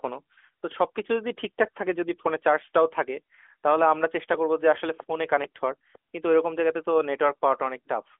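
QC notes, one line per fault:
2.75 s, dropped samples: a single sharp click, seen as a thin vertical line across the spectrum. The likely cause is that a tiny run of samples, under a millisecond's worth, went missing from the stream. The waveform then leaps straight from one value to a later one instead of moving smoothly. The gap is too short to remove any audible sound, so only the click remains, heard within the narrowband mobile-codec band that stops a little below 4 kHz.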